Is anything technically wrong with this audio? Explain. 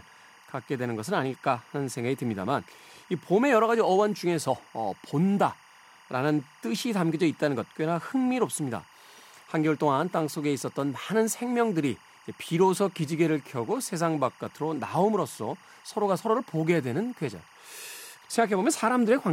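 Yes, there is timecode bleed throughout the speech. Linear timecode from an adjacent track or cable leaks in roughly 30 dB below the voice. Its square wave flips between tones around 1 and 2 kHz, with a rhythm that fits 23.976 fps code. This produces a chirping warble, unlike the single steady pitch of a whine or hum.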